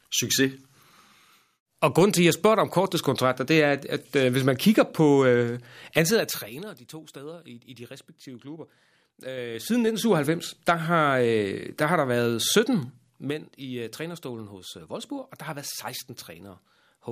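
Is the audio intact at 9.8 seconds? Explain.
No. At 9.8 seconds the speech carries a ticking, zipping texture as its level moves. This is zipper noise, running from 9.13 to 10.16 s. The gain moves by about 20 dB in unsmoothed 3 dB steps, roughly seven per second. Each abrupt jump puts a small discontinuity into the waveform, and those clicks line up into the audible zipper as the level moves.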